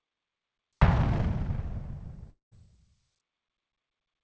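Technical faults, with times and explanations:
2.30–2.53 s, long network dropout: the last sound smears into a fading buzz, then 150 ms of silence. 220 ms of audio likely never arrived.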